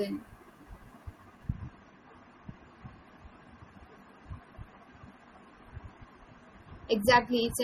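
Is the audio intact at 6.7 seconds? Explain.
No. From 1.52 s to the end of the clip, 6.7 s included, the audio comes from an adaptive stream at a lower bitrate. The player dropped to a cheaper version of the stream when the connection slowed, and the sound points to a fall from about 128 kbit/s MP3 to about 32 kbit/s. At that switch the quality changes abruptly with no gap: nothing is left above 14.9 kHz, and the speech carries thicker, more audible coding artefacts.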